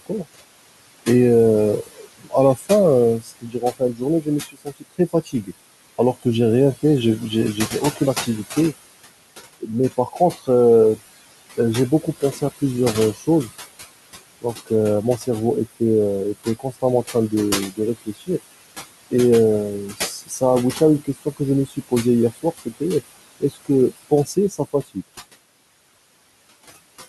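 Noise suppressor artifacts run throughout: the suppressor pulls steady room noise, sitting about 13 dB below the speech, down by about 19 dB frame by frame, so the noise sinks between the words and rises under them. Speech cut by the noise suppressor appears at 1.84–6.26 s, 6.83–8.57 s, 9.6–11.0 s, 11.57–13.5 s, 14.42–15.81 s, 16.45–18.4 s, 19.9–22.82 s and 23.4–24.97 s. The suppressor mistakes quiet speech for noise, with drops of up to about 21 dB. Consonants and word endings sound swallowed. The worst stretch, near 2 to 6 s, loses about a second and a half in total.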